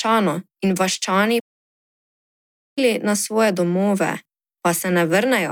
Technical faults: playback stall

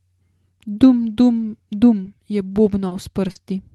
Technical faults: short concealed packet loss

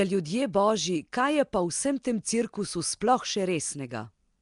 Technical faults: Nellymoser compression; pre-echo

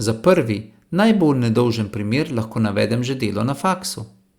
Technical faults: none

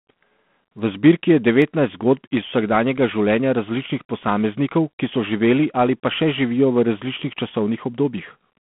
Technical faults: G.726 ADPCM; dropped samples

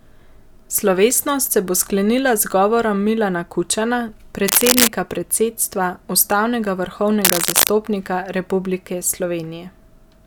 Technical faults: cable scratch noise

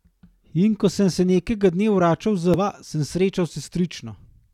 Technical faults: damaged data in a compressed stream

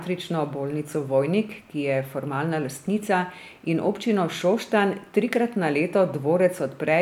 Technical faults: none

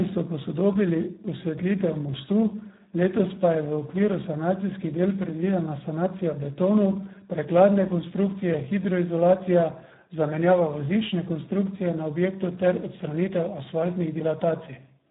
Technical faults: Speex codec

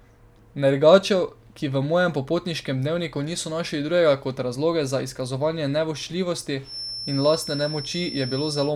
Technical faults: feedback whistle

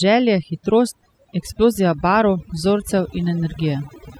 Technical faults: overdone noise removal

